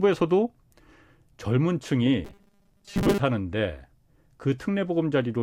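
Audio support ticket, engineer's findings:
Robotic sound from repeated short buffers, 2.25 to 3.21 s. Speech becomes rigid 200 Hz buzz. Likely starved input, about half replaced by looped 5 ms chunks.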